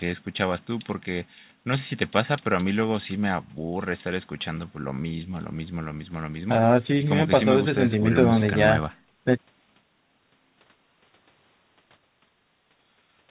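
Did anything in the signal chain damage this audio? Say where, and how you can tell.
No, nothing damaged this audio.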